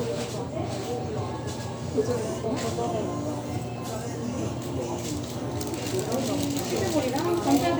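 No technical faults can be heard anywhere in the recording; the signal stays continuous and intact throughout.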